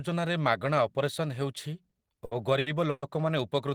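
From about 1.89 s to 3.04 s the speech hits repeated stalls, a stutter. Packets were turning up late, so the jitter buffer kept running dry, six times in that stretch. Each time the receiver stretched out the last bit of sound to cover the hole, fading it on the longer waits; the longest gap is 120 ms. That's roughly 310 ms of patched-in audio, over a quarter of the span, so nothing actually drops out, but the speech drags and hiccups.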